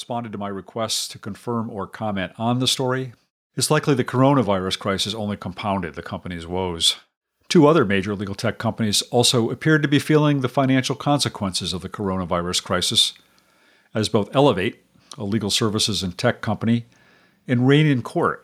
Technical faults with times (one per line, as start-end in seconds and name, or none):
0.08-6.88 automatic gain rising